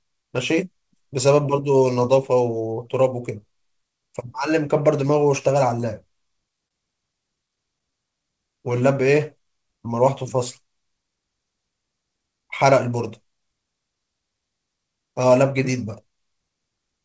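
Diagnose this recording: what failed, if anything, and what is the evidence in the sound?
Scattered short gaps, at the network stage, run from 6.28 to 8.22 s. About seven small packet losses occur there, the longest around 30 ms, totalling roughly a tenth of a second of patched audio, or about 4% of that stretch. Each hole is heard as a tick or brief smear because the receiver extends the last sound instead of falling silent. That sets this apart from hardware dropouts, which cut abruptly to silence or produce sharp clicks.

A jitter buffer slow-down follows from 7.91 to 10.37 s, overlapping the end of the losses. The buffer was short of audio, so it repeated single pitch periods and slivers of pauses to build a reserve. This adds 114 ms, and the audio plays at 96% speed with slightly drawn-out sounds. The pitch stays where it was, and that rules out clock drift or a sample-rate mismatch, which would lower the pitch along with the tempo.

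A jitter buffer speed-up runs from 12.33 to 13.38 s. The buffer had more audio than its target, so it cut short pieces of one or a few pitch periods to reduce the delay. About 100 ms is removed, and the audio runs at 108% speed and sounds hurried. The pitch again holds steady, unlike a rate mismatch, which would raise it. The call path shows nothing above 8 kHz, which fits G.722 at 64 kbps.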